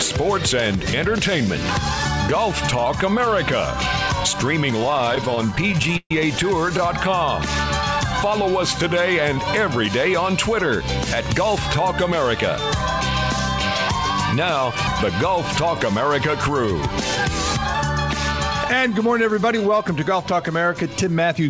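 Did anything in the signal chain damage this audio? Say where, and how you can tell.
Yes. Repeated stalls (stutter) from the network and jitter buffer stage occur between 4.80 and 6.11 s. About two dozen times the buffer ran dry, and the receiver stretched the last sound forward, fading it during the longest wait of 132 ms. Roughly a quarter of that stretch is concealment, but nothing is lost. A spectrogram shows smeared, repeated frames with faded tails, and the waveform shows hesitating, stop-start envelopes.

A jitter buffer slow-down runs from 8.07 to 8.95 s. The buffer, running low, repeated single pitch periods to rebuild its reserve. This adds 74 ms and plays at 92% speed with the pitch unchanged. On a spectrogram, harmonics stay at the same frequency while features stretch in time. The waveform shows duplicated cycles.

A jitter buffer speed-up occurs twice: from 11.04 to 11.93 s at 106% speed, removing roughly 70 ms, and from 17.01 to 17.75 s at 104%, removing roughly 40 ms. 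Excess buffered audio was trimmed by cutting out pitch periods, so the sound runs faster at the same pitch. This appears as compressed timing with splice points in the waveform. The call codec's band limit, with nothing above 8 kHz, fits a wideband G.722 link.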